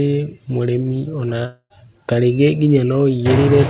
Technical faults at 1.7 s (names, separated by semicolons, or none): long network dropout